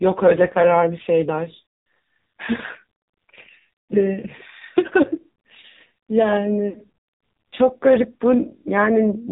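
All the way through, the speech carries the AMR narrowband mobile codec sound: nothing above 4 kHz, and a heavily buzzy, synthetic quality, which fits one of AMR-NB's lowest modes, around 5.9 kbps. With so few bits, the vocal-tract model gets very little to work with.

From 6.70 to 6.82 s there are lost AMR speech frames. The decoder stretches the last good pitch and vocal-tract settings while fading them, so the sound briefly drags and dips. The gap fits about two 20 ms frames, and the speech comes back a touch rough.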